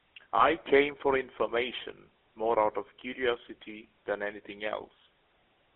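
Throughout, the speech carries the GSM full-rate codec's buzzy, gravelly roughness within a 300 to 3400 Hz telephone band. That rasp, not warble or smearing, points to pulse-driven vocal-tract modelling, consistent with 13 kbps full rate. From 0.38 to 0.49 s, just before "came for information more", lost GSM frames leave a brief rough metallic ring rather than a silent gap, fitting one 20 ms frame concealed by repetition.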